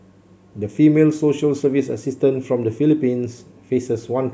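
Speech, with no technical faults audible anywhere in the recording.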